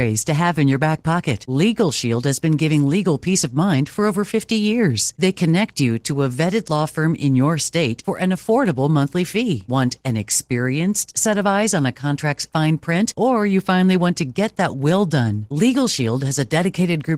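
Opus voice compression runs throughout the speech, its plainly audible damage pointing to a bitrate near 16 kbps in hybrid mode: a linear-prediction layer codes the lower band coarsely while a thin transform layer carries the top, leaving the voice hoarse and slightly robotic.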